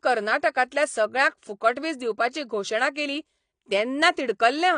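AAC compression runs through the whole clip, from start to finish, and the speech carries plainly audible codec damage. Nothing reaches above 9.8 kHz, so the top octave is missing and the sound is dull. The cause is likely AAC-LC coding at a low bitrate, which fits about 32 kbps. At that rate the encoder has too few bits for the spectrum, so it drops the high band and quantises the rest coarsely, and that coarse coding is what you hear as damage.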